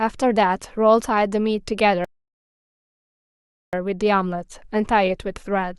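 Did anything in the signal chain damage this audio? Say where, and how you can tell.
Yes. The damage happened at the network and playback stage, as a rebuffering stall. At 2.05 s the speech drops to dead silence, and it comes back at 3.73 s, picking up exactly where it broke off. No syllables are missing and nothing repeats, so no audio was lost. About 1.7 s was inserted into the timeline. That pattern means the player drained its download buffer and held output until more data arrived.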